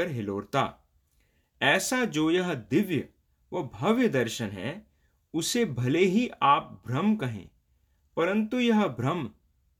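Speech recording with no audible technical faults anywhere in it.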